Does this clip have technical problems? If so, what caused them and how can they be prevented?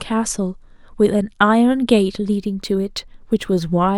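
Yes. From 2.37 s to the end of the clip, the speech shows imaging from linear upsampling. The top of the band goes dull, and a faint metallic shimmer rides on sibilants. Straight-line interpolation between samples leaves mirror copies of the spectrum at 12 to 24 kHz, very roughly 40 dB below the signal. This fits a 24 kHz source raised to 44.1 kHz. Unlike aliasing, the shimmer sits above the original band instead of folding down into it. Using a proper windowed-sinc or polyphase resampler prevents it.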